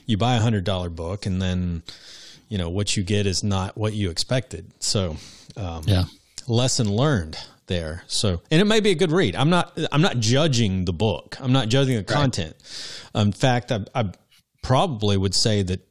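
No dropouts, clicks, distortion or timing errors turn up anywhere in the recording, and no fault can be heard at any point.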